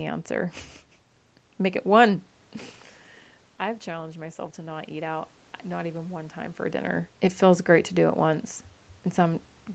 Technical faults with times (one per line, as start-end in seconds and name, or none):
3.60-7.16 automatic gain rising